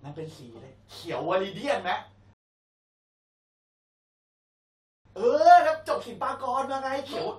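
At 2.33 s the speech drops abruptly into silence and stays silent until 5.05 s, then picks up exactly where it broke off. This is a rebuffering stall: playback ran dry of downloaded audio and waited, adding about 2.72 s without losing any content.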